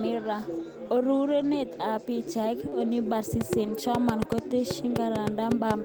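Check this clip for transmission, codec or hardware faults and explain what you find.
Three kinds of fault are audible in this speech: two stretches rebuilt from error correction, one brief concealed dropout, and a train of clicks over the last part.

From 1.39 to 1.53 s, and again from 3.64 to 3.70 s, the speech turns rougher and grainier without any gap. This is a lost packet rebuilt from error correction. The missing audio was replaced by a low-bitrate backup copy carried in the following packets. The first rebuilt stretch lasts 80 ms, which fits four 20 ms packets. The second lasts 40 ms, which fits two.

At 2.69 to 2.74 s there is a short concealed packet loss, heard as a quick smear in the speech. About 20 ms of audio arrived too late to use. The decoder extended the preceding sound across 25 ms to cover the hole, then blended back into the real signal.

From 3.41 s to the end, a train of clicks ticks over the speech and through its pauses. 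The clicks come at about five per second with uneven spacing, and their peaks stand roughly 15 dB above the speech. Their matching shape and repeated recurrence point to a likely cause such as electrical interference or a faulty connection or power supply.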